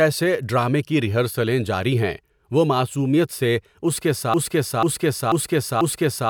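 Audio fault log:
4.34 s to end, broken-record loop: right after "معصومیت سے اس کے", a piece of about 0.49 s repeats exactly, back to back, four times until the speech ends, and the speech that should follow is lost. Likely a stalled player or stream resending its last buffered fragment.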